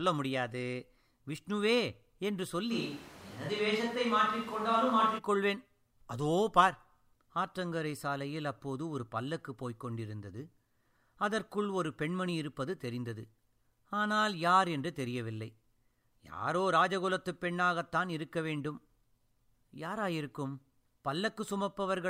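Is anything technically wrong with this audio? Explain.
Yes. From 2.73 to 5.17 s the speech turns suddenly roomy and hollow, with thinner bass and background noise sitting roughly 20 dB below the speech, then snaps back just as abruptly. The overall level stays about the same. This sounds like a switch to a distant microphone: the close microphone's feed likely dropped out for those seconds, so the recording fell back on one farther away that captures more of the room.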